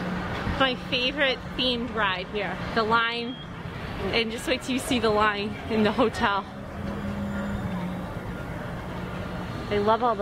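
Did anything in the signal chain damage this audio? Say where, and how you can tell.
No, I can't hear anything in the chain that has damaged this audio, so there's no stage to point a finger at.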